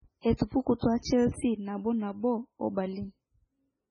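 MP3 compression runs through this whole speech recording. Nothing is left above 10.4 kHz, and the heavy watery, swirling texture fits a very low bitrate of around 16 kbps. The likely cause is an encoder that, starved of bits, cut off the treble and dropped weak frequency components that flicker from frame to frame. Pre-echo appears from 0.37 to 0.40 s and from 0.79 to 0.82 s, a short hiss about 29 ms and 36 ms long before two sharp onsets. The codec spread its quantisation noise across each block, so noise sized for the attack leaks into the quiet just ahead of it and softens the onset.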